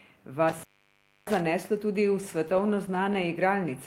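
Speech, with two separate faults. From 0.49 to 1.40 s there is an intermittent contact. A loose plug or cable breaks the signal for about 635 ms in total. The speech drops out, with crackle where the connection opens and closes. From 2.21 to 3.29 s come repeated stalls, heard as stutter. Packets arrived too late to keep up with playback. The jitter buffer ran dry twelve times, each gap 15 ms or shorter. The receiver stretched the last sound to cover about 121 ms. Nothing is lost, but the speech drags and stutters.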